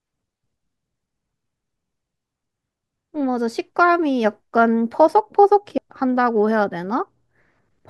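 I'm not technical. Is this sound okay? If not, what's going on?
No. At about 5.78 seconds there's a tiny chirp or blip in the speech. That's damaged data in a compressed stream: part of the compressed file was corrupted, so the player briefly misread that spot before finding its place again.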